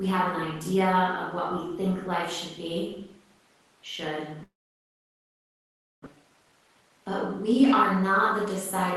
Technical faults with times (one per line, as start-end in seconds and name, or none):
4.43-6.08 long network dropout
6.16-8.10 jitter buffer speed-up